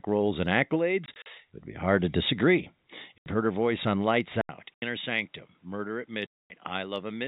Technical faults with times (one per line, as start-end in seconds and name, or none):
1.06-1.26 packet loss filled with silence
3.19-3.26 packet loss filled with silence
4.41-7.28 input switched to a poorer device
4.74-4.82 packet loss filled with silence
6.26-6.50 packet loss filled with silence